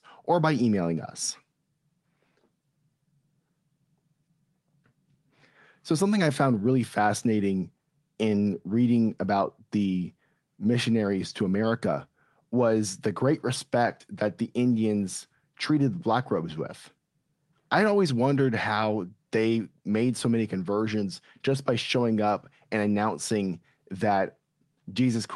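No technical faults can be heard anywhere in this speech recording. It has passed through a working WebRTC call path, and its high frequencies stop at around 12 kHz, which fits an Opus call codec.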